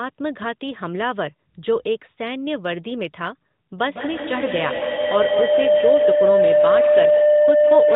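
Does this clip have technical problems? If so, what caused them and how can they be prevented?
Yes. Feedback howl starts at 3.86 s and runs to the end of the clip: a microphone picks up a loudspeaker carrying the same call, and each round trip adds gain. The tone narrows to around 700 Hz, pulses about every 150 ms, and peaks about 6 dB above the speech. To prevent it, mute the extra device's microphone or speaker, use headphones, or join the call from only one device in the room.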